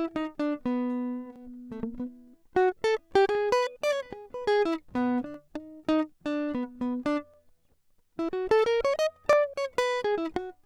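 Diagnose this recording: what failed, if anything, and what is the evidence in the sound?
Audio missing between chunks, likely at the buffer or driver stage: the music skips at 1.36, 3.35, 5.34, 7.34 and 9.33 s, one every 2 s, each losing a few milliseconds and splicing the two sides together without a gap, as the processor closes one chunk and opens the next.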